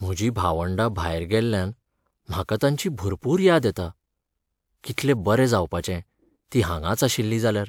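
A speech recording with nothing technically wrong in it. No fault can be heard at any point in the clip.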